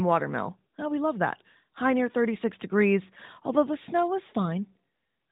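Sample clock jitter runs throughout: roughly a microsecond of timing wobble adds faint roughness, about 50 dB down, on loud, bright speech, heard beneath the narrowband AMR-NB codec's 3.8 kHz ceiling.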